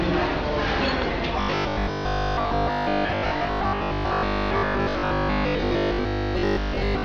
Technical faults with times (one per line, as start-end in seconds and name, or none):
1.41-7.05 robotic sound from repeated short buffers